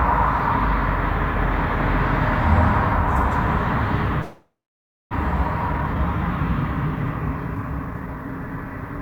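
Everyday sound cuts out at 4.21 s, the last moment smeared into a fading buzz before about 0.6 s of silence, returning at 5.15 s with that part gone, likely a long network dropout. Afterwards it plays hurried at unchanged pitch, at 143% speed from 5.68 to 5.96 s and at 112% from 7.55 to 8.65 s. This is jitter buffer speed-up, where short pitch-period slices are trimmed to shed roughly 150 ms of backlog each time.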